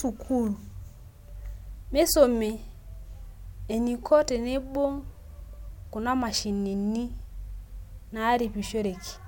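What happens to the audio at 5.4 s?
Nothing goes wrong at 5.4 s; the speech carries on intact through that moment with no dropout, click, distortion or other fault.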